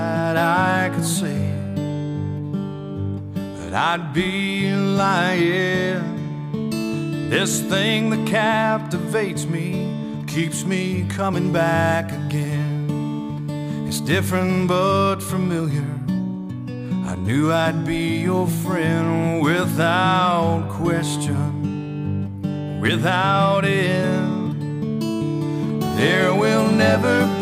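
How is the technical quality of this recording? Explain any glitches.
The recording has one glitch. Crude rate conversion from 11.32 to 14.63 s: the sound seems converted upward, which fits 44.1 kHz to 48 kHz, by repeating nearest samples without filtering. The patterned error, roughly 25 dB below the signal, adds a gritty, inharmonic fizz that tracks loud and high sounds.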